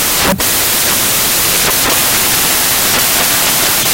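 A speech recording buried from start to finish under loud, harsh broadband noise: samples built from the wrong bytes, so each value's fast-changing low bits become its large part. The spectrogram shows broadband noise filling every frequency.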